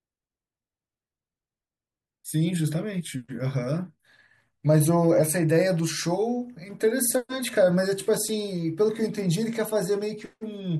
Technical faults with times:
none

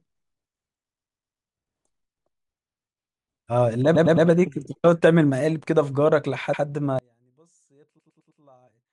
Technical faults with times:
0.94-1.45 repeated frames
3.95-4.27 repeated frames
6.53-6.63 repeated frames
6.99-8.92 one channel inverted
7.98-8.40 repeated frames

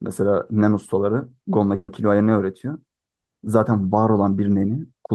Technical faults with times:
1.75-1.90 call audio freeze

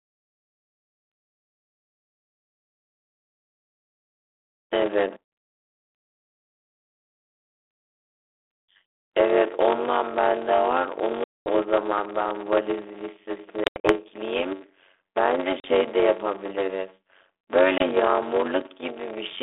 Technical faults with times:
0.00-19.43 block size mismatch (padded)
5.24-5.32 packet loss on an ADPCM call
8.86-9.08 packet loss on an ADPCM call
11.24-11.47 packet loss on an ADPCM call
13.64-13.93 packet loss on an ADPCM call
15.60-15.65 packet loss on an ADPCM call
17.78-17.83 packet loss on an ADPCM call

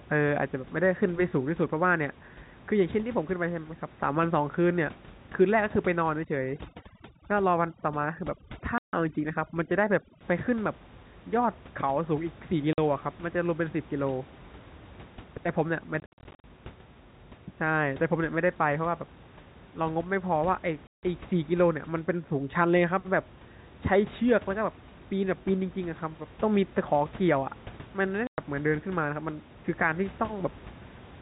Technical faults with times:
6.24-10.21 overdone noise removal
8.78-8.93 packet loss filled with silence
12.73-12.78 packet loss filled with silence
16.00-16.44 packet loss filled with silence
20.87-21.03 packet loss filled with silence
28.27-28.38 packet loss filled with silence

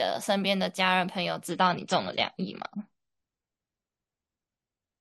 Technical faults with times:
1.49-5.01 adaptive stream at a lower bitrate

